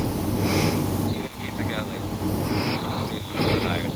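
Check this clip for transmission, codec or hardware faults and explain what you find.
No transmission, codec or hardware problem can be heard anywhere in the speech recording, and the signal holds steady without audible interruption or damage.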